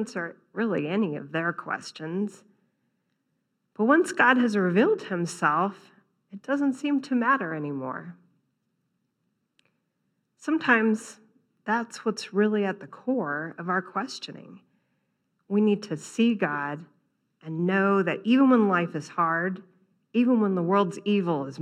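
Nothing stood out as a technical fault on listening to this speech recording.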